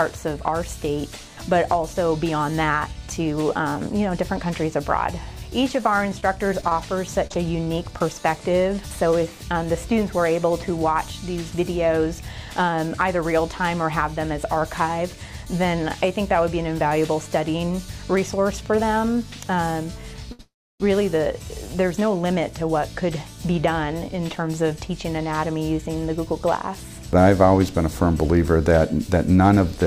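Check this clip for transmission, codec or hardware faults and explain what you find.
The clip shows four kinds of network fault: packet loss, a stall, a freeze and two speed-ups.

Repeated packet loss (robotic sound), 5.81 to 8.02 s: ten short holes, none over 30 ms, are patched by repeating prior sound, giving a choppy texture. Unlike a stall, about 120 ms is actually missing.

Short stall from a late packet, 20.32 to 20.41 s: the last sound is stretched for 71 ms until the packet arrives, then resumes unchanged. It is held too long, but nothing is lost.

Call audio freeze, 20.41 to 20.82 s: a fading buzz or hiss decays into about 310 ms of silence, then the sound resumes where it stopped. The likely cause is delayed packets draining the jitter buffer. It is longer than the stall and reaches true silence.

Jitter buffer speed-up, 24.36 to 24.86 s and 29.17 to 29.85 s: pitch-period slices are trimmed, about 40 ms and then 70 ms, so the sound plays 7% and 10% fast at unchanged pitch. 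It sounds hurried, with no gaps.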